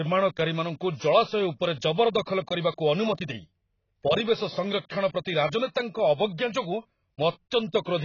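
AAC compression runs throughout the speech, heavy and likely low-bitrate (fitting roughly 16 kbps): nothing above 6.8 kHz, leaving it dull, smeared and fizzy on sibilants.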